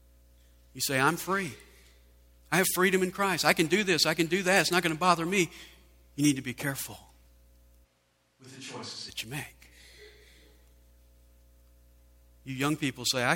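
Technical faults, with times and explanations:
7.86 to 9.07 s, switch to a distant microphone. The speech suddenly turns roomy and hollow, with thinner bass. The level drops by roughly 10 dB. Room noise comes up to around 30 dB below the speech. The return at 9.07 s is just as abrupt. The likely cause is that the close microphone's signal dropped out, leaving one placed further away. That microphone hears more room reflections and less low end.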